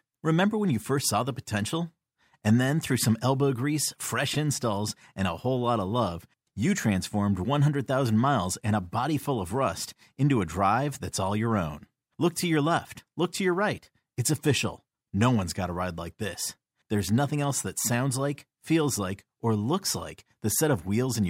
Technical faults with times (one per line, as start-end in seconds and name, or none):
1.03 repeated buffer
4.34 repeated buffer